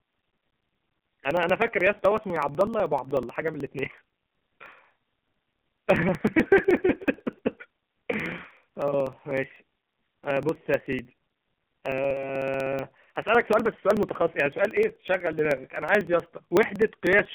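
From the first moment the speech sounds boxed-in and buzzy, with a synthetic, robotic edge, and nothing reaches above about 3.5 kHz. The line band sits roughly between 150 Hz and 3.4 kHz. This is the AMR narrowband mobile codec, heavily damaging the signal. It rebuilds the voice from a coarse vocal-tract model with only a few excitation pulses per frame. The harshness points to a low rate of about 6.7 kbps.

From 0.07 s to 17.25 s, a steady stream of ticks rides on the speech, about sixteen per second, spaced 0.062 s apart. They are heard only where there is signal. These are periodic USB or driver dropouts. At each interval something stalls the audio path, and roughly 2 ms of sound is skipped outright rather than filled. The waveform jumps across each gap, and each jump produces a click.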